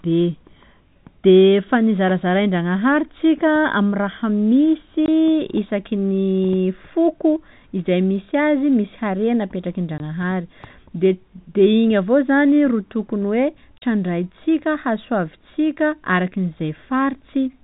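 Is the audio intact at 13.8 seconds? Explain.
No, there's packet loss filled with silence from 13.78 to 13.82 s. A 40 ms hole, consistent with two 20 ms packets dropped and replaced with silence, cuts the speech with hard edges.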